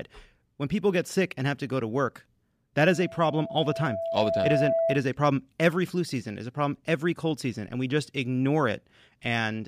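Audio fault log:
2.85–5.06 s, loudspeaker feedback squeal: a 663 Hz tone swells over about 1.5 s to roughly 5 dB above the speech, a bright horizontal spectrogram line.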